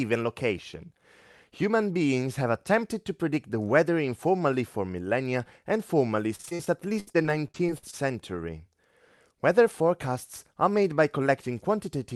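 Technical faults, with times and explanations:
6.35–7.95 s: repeated packet loss (robotic sound). Dense short dropouts, longest 70 ms, each filled by extending the previous sound, leave speech choppy and robotic.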